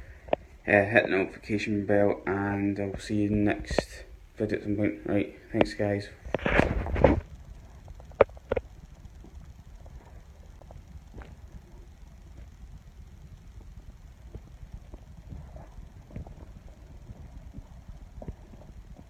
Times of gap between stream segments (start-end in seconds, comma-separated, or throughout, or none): 10.59